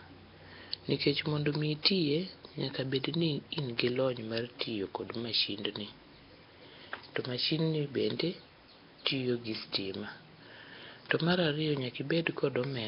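From start to finish the speech carries heavy Nellymoser compression damage, most likely from the old Flash microphone codec, Nellymoser Asao, at a rate pointing to roughly 22 kbps. Each short block gets only a fixed, meagre bit budget, so quiet bands are replaced with noise. The result is a rough, hissy halo and a smeared, underwater tone. A spectrogram shows a hard ceiling at 5.3 kHz and grainy, blotchy fill between the speech harmonics.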